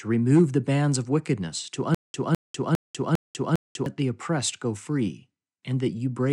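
The playback most likely stalled and, at each retry, replayed its last buffered fragment before running dry, producing a stutter with silent gaps from 1.95 to 3.86 s in this speech. Right after "bands of wickedness to", a burst of about 207 ms repeats five times, each followed by about 196 ms of dead digital silence, giving a steady 403 ms stutter. The audio due in that span is lost before "the oppressed go free" resumes.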